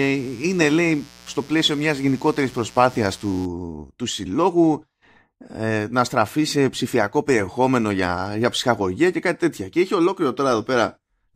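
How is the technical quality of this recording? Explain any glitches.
The recording has one clear fault. A mains buzz runs from the very start to 3.45 s. It sits about 25 dB below the speech. Its base is 60 Hz. A switching device such as a dimmer or rectifier, or a missing shield, injects sharp spikes twice per mains cycle. Those spikes carry harmonics of 60 Hz well up into the kilohertz range. The result is a steady, raspy buzz under the speech that stops at 3.45 s.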